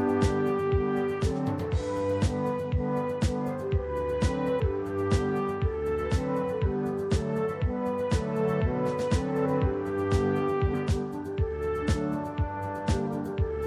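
Throughout, low-bitrate lossy coding, likely MP3 around 64 kbps, cuts the treble and makes weak components flicker, giving plainly audible watery, swirly artefacts. At 4.59 s and 10.73 s, compressed frames are skipped, so the sound jumps ahead about 0.1 s and then 0.2 s, each join a brief smeared blip.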